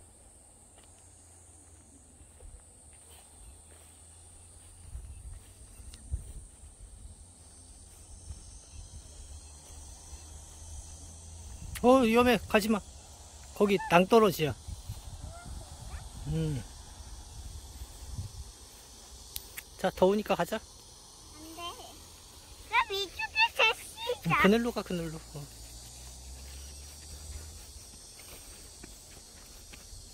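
Nothing in the signal points to a technical fault at any point in the recording.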